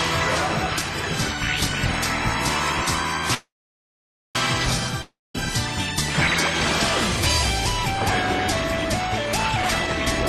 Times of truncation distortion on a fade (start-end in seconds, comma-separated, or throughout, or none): none